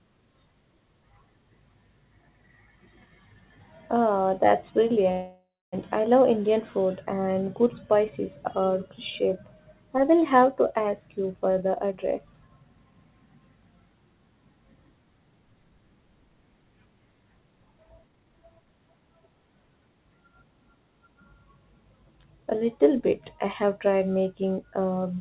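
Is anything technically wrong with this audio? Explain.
Yes, two faults stand out in this 4 kHz band-limited speech, which fits a narrowband call path.

From 5.12 to 5.74 s, just before "I love", a call audio freeze, likely from held-up packets draining the jitter buffer, stretches the sound into a fading buzz, then about 0.29 s of silence. A waveform shows a decaying tail and then a flat line.

From 11.34 to 13.27 s, after "will have to ask", a jitter buffer speed-up trims about a fifth of a second of pitch periods. Speech runs 111% fast at unchanged pitch, and the spectrogram shows compressed syllables.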